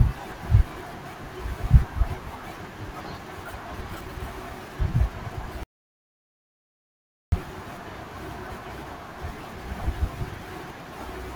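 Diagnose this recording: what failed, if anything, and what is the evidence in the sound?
An audio dropout to silence cuts the speech off mid-flow at 5.63 s and lets it resume at 7.32 s, losing 1.69 s. No room tone remains: a flat line on the waveform, a blank spectrogram column. The likely cause is input lost upstream while the recorder kept writing zeros.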